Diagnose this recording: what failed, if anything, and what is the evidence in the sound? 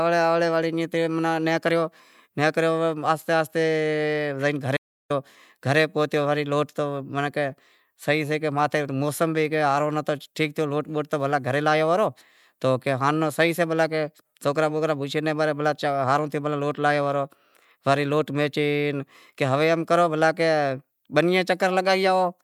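An audio dropout to silence runs from 4.77 to 5.10 s. The speech stops mid-flow and resumes at "گھرے پہتیو تو وڑے". The gap is silent, with no room tone, for about 0.33 s. This likely points to the input path: the device or link lost signal while the recorder kept writing silence.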